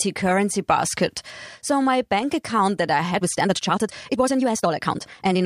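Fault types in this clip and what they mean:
Time-stretched section: after "bank account that I", from 3.09 s to the end, the speech suddenly runs about 1.73 times faster while its pitch holds steady, so it turns rushed. Likely software squeezing that stretch to fit, dropping short slices to keep pitch.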